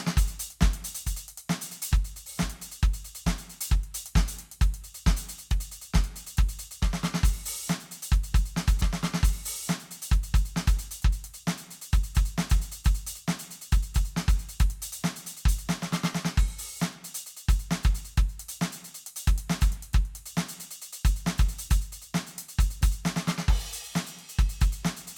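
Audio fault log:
8.80–10.80 s, stream segment repeated: about 2.0 s of music plays a second time after a small blip at the jump back, unlike a dropout, which loses audio.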